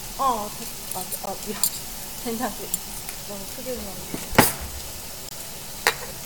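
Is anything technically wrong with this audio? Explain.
Yes. Two gaps between stream segments interrupt the audio, one at 1.26 s and one from 5.29 to 5.31 s. In each case, the timestamps of adjacent 1-second segments fail to line up, so the player pads the space with silence: about 15 ms at the first point and about 24 ms at the second. Both are heard as brief hard-edged dropouts. Nothing is removed from the audio; the silence pushes everything that follows slightly later.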